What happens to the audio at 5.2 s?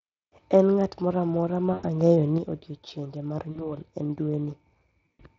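At 5.2 s, VoIP packet loss concealed by the speech codec is in progress, from 5.06 to 5.22 s. About 100 ms of audio is missing, scattered over 140 ms, with the longest gap 80 ms. The decoder stretches its last pitch and filter with falling gain, so the speech turns into a fading buzzy or noisy smear. Underneath, the level has been about 6 dB lower since 2.38 s. That drop is likely caused by one channel dropping out, leaving only half of the common sound in the mono sum.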